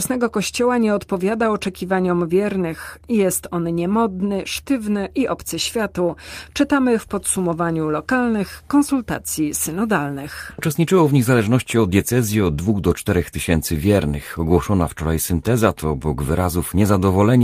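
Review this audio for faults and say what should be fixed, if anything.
No faults can be heard; nothing needs fixing.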